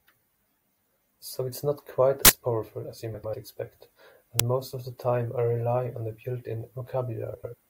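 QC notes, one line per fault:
2.25–2.29 s, uninitialised buffer: a block was played before audio was written to it, so leftover memory came out as a loud burst of digital noise between "it's not quite" and "powerful as you"; its length fits a 2048-sample buffer.
4.40 s, uninitialised buffer: the same failure on a shorter block, heard as a brief noise crack just before "most of the time"; this one fits a 512-sample buffer.
3.14–3.34 s, frames out of order: two neighbouring runs of about 96 ms each were decoded in swapped order just after "powerful as you". The stretch plays with its halves exchanged, a garbled flutter.
7.34–7.54 s, frames out of order: the same swap of two roughly 96 ms runs, each pointing to four frames. It gives the same brief flutter, and no time is lost.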